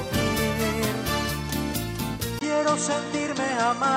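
At 2.39 s the sound drops out for 20 ms. From there to the end it turns duller and boxier, with nothing above 8.4 kHz. A new noise floor sits about 30 dB down. The level barely changes. This is likely an input switched to a poorer device.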